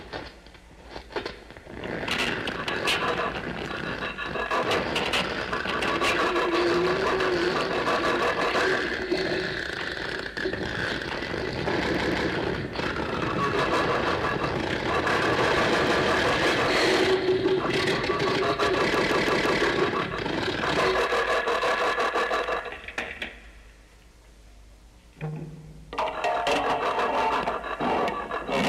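At 11.95 to 12.29 s, 15.87 to 16.04 s and 18.94 to 19.63 s, the audio stutters with a repeated buffer. Each time, new audio arrived late, so the playback device replayed its last block of about 0.17 s, which fits an 8192-sample buffer. That block sounds twice more at the first point, once more at the second and four more times at the third, with a hard join at every repeat. Playback then continues without any apparent gap.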